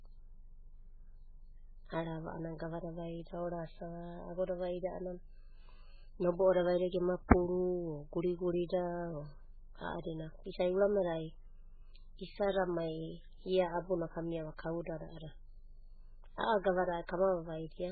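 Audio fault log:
Throughout: MP3 compression, heavy. Nothing above 4.5 kHz remains, and the speech sounds watery and swirly, likely from a very low bitrate near 8 kbps.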